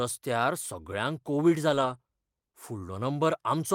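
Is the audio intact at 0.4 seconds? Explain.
Yes, at 0.4 seconds the speech plays through intact, with no dropout, click, distortion or other audible fault at that moment.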